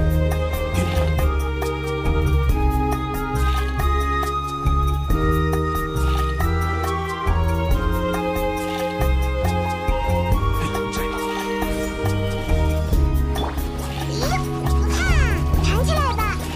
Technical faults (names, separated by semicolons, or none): none